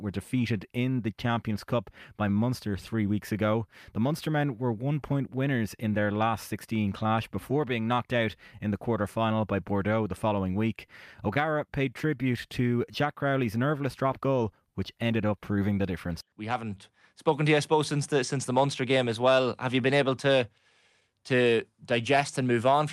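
Clock drift between sender and receiver runs through the whole clip. The sending clock runs roughly 4% slow, so the receiver's buffer keeps draining and must be refilled. Unlike random packet loss, the disturbances all lean the same way.

Repeated timing corrections follow from 0.37 s to 22.76 s. The receiver repeatedly duplicates short pieces, slowing the sound to about 97% of its original pace and adding roughly 0.7 s overall. These are uneven small hiccups and a wavering tempo, not one steady slowdown with lowered pitch.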